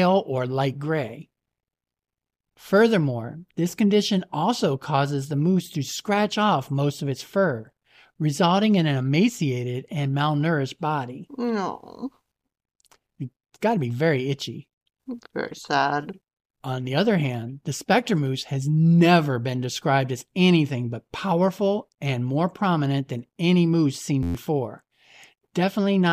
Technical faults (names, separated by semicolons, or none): system hang loop